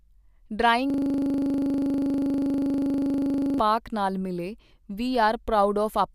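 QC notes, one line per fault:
0.90–3.59 s, system hang loop: the system or driver froze while the audio hardware kept replaying one 40 ms ring buffer, so a single sliver of the speech repeats exactly, about 67 times, merging into a rough, rapid buzz at 25 Hz.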